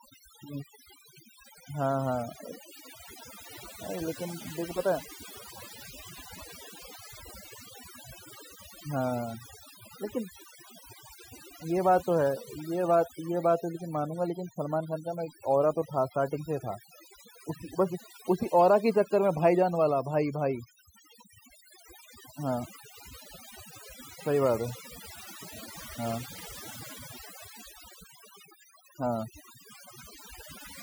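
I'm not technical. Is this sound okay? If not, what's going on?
No. The speech has been hit by overdone noise removal, and it lasts from start to finish. A cleanup tool meant to take out background noise was set far too strong, so it shuts off any slice of the sound it mistakes for noise, including the softer parts of the voice. That is why the background between phrases drops away and breaks up into twinkling, warbling specks.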